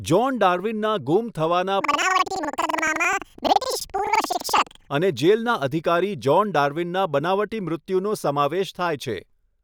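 From 1.81 s to 4.96 s, the speech jumps an octave high. This is planar audio read as interleaved. Each 85 ms block stores one channel, then the other. Read as pairs, each block plays twice at double speed. It flutters at about 11.7 Hz.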